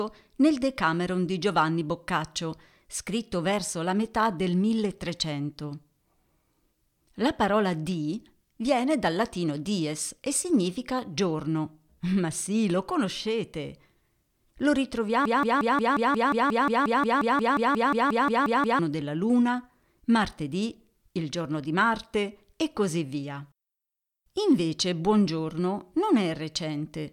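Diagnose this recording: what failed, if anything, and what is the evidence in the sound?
A stall in the playback or stream buffer likely left it resending the last fragment it held, producing a broken-record loop. From 15.25 to 18.79 s, a 0.18 s piece of speech repeats exactly 20 times, back to back. The audio for that span is lost, and normal playback resumes at "della luna".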